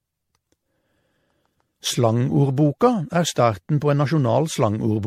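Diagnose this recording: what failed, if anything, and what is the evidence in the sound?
Codec stage. Throughout, the speech sounds swirly, hollow and smeared, with blurred attacks and nothing above 16.4 kHz, which fits MP3 at 64 kbit/s. It's likely generation loss from around seven re-encodes, each pass re-quantising on a shifted frame grid.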